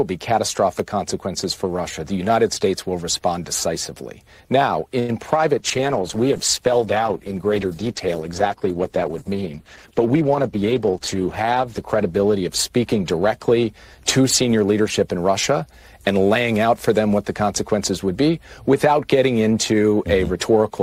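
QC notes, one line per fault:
4.99–5.11 s, short stall from a late packet: The sound hangs for about 91 ms. A packet arrived late and the jitter buffer ran dry. The receiver stretched the last bit of audio to fill the gap. Then it carried on from the same point, so nothing is lost. The ear hears one moment held too long, with a faint buzz or dip. The stall adds 91 ms of delay from here on.
5.59–16.18 s, call bitrate drop: The sound turns coarse and dull. The bandwidth estimate fell, so the encoder was told to spend far fewer bits, going from 128 kbps down to 11 kbps. It stays at the lowest rate for about 5.9 s. At so few bits Opus codes roughly and trims the upper frequencies. The result is rough, watery and muffled until the rate climbs back near 16.18 s.
9.99–11.00 s, jitter buffer speed-up: The audio rushes forward at 109 percent speed with its pitch unchanged. After delayed packets arrived together, the buffer held more than its target. 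To shrink that delay the receiver cut short slices, each one or a few pitch periods long, over and over. About a tenth of a second is removed in total. This passage falls inside the low-bitrate stretch, so it sounds both hurried and degraded.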